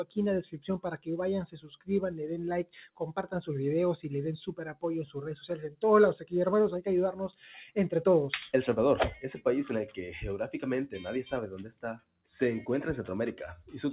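A speech-tuned noise suppressor applied to music or sounds pumps the level up and down by roughly 10 dB throughout, with the sound band-limited to 4 kHz by a call path that fits G.711 mu-law at 64 kbps. Unlike a compressor, which ducks after loud attacks, or dropouts, which cut everything, this leaves attacks intact and sinks held tones and tails. The clearest cases of sound cut by the noise suppressor come at 1.51–1.89 s, 2.64–3.01 s, 4.51–4.83 s, 5.41–5.83 s and 11.51–12.26 s, each dipping by about 16 to 17 dB, plus a milder drop of about 9 dB at 13.57–13.74 s.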